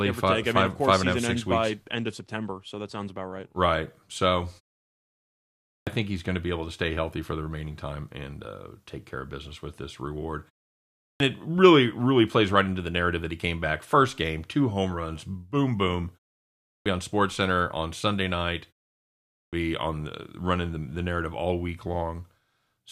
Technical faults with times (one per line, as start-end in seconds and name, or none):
5.48-5.87 clipped start after a pause
10.83-11.20 clipped start after a pause
16.52-16.86 clipped start after a pause
19.20-19.53 clipped start after a pause